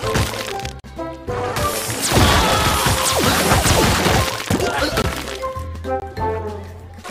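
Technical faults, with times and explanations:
0.80–0.84 s, 5.02–5.04 s and 6.00–6.02 s: block of digital silence. The sound drops to silence for 40 ms, then twice for 20 ms. The output buffer was likely not filled in time. Each cut and return is abrupt, so these are heard as short holes.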